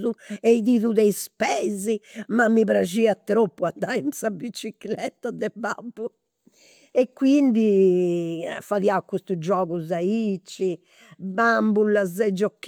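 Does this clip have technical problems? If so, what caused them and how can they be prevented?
Yes. Clock slip clicks tick faintly about five times a second from 0.19 to 12.5 s through the speech. Each one is a single dropped or repeated sample, likely from two unsynchronised device clocks differing by roughly 100 ppm. Locking both devices to one shared word clock prevents it.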